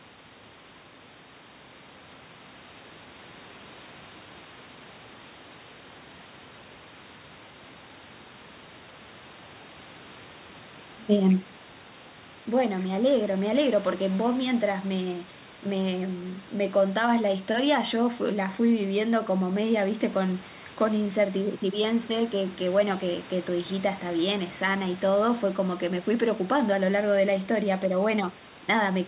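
Listening through the speech, nothing stood out as a technical fault.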